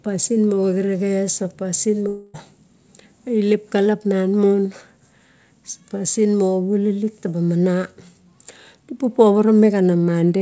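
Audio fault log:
2.08 to 2.36 s, long network dropout: for about 0.28 s the sound stops progressing and is replaced by a synthetic continuation of the preceding audio, a smeared buzzy tail that carries on for about 256 ms with no fall into true silence. The likely cause is a run of lost packets, with the receiver's concealment stretching the last good sound until fresh audio arrived. The missing stretch never returns. Around it the call path's band-limiting shows, with nothing above 8 kHz, consistent with G.722.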